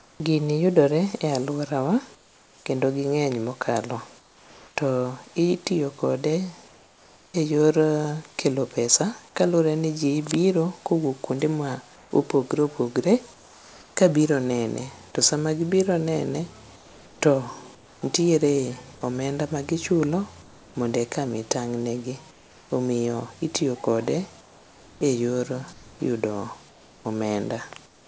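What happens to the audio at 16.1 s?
Nothing goes wrong at 16.1 s: the speech continues intact through that moment, carried by the normal call path, which passes nothing above 8 kHz.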